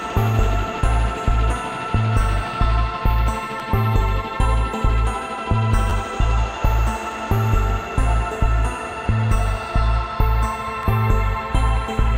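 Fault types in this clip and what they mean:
repeated buffer: Brief clicks or buzzes at 3.60, 5.90 and 10.83 s, where an 11.6 ms piece of sound repeats with a hard join, twice at 5.90 s and once elsewhere. Audio came late, so the device replayed its last buffer, matching a 512-sample buffer.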